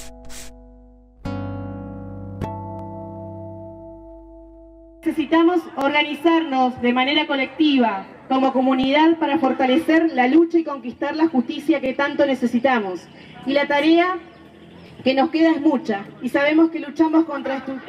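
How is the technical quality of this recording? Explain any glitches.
A regular glitch mars the recording: a brief stutter at 2.79–2.81, 5.81–5.84, 8.84–8.86, 11.86–11.88 and 14.88–14.90 s, where about 21 ms of sound plays twice. These are overlapping chunks: each 3.0 s block begins before the previous one ends, so every join repeats a sliver.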